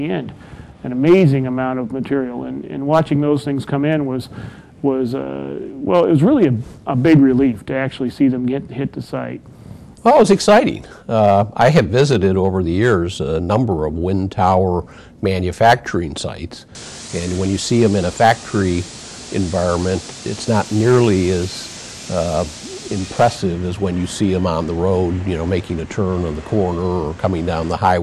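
Hard clipping runs through the whole clip: the signal is driven about 8 dB past what the chain can pass, so its peaks are sliced off flat. Only a small fraction of samples, under one percent, hit the ceiling, so the damage lands on the loudest moments as brief crackle and a gritty edge. The flat-topped waveform throws harmonics far up the spectrum, giving an abrupt, brittle harshness rather than the rounded thickening of soft saturation.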